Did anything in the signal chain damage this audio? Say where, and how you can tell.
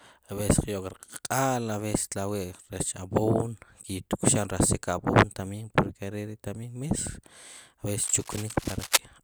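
Yes, in the analogue wiring. Cable scratch noise from 8.03 to 8.98 s, nearly as loud as the speech. Likely a worn connector changing resistance as it moved.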